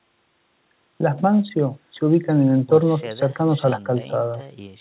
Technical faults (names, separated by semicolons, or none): none